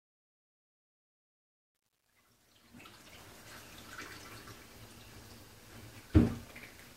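An everyday sound recording opens with truncation distortion on a fade, from 0.0 to 3.33 s. The fade-in keeps too few bits and has no dither. The quiet start turns gritty, worst up to 3.1 s, which fits roughly 10-bit resolution.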